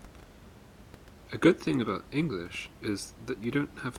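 There are no technical faults to describe in this clip.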